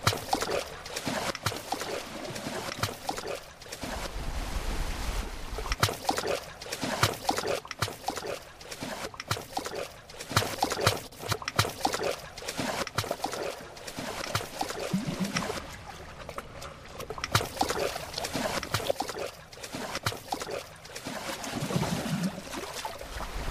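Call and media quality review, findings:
No findings: the call and media quality review turns up no faults in this sound recording.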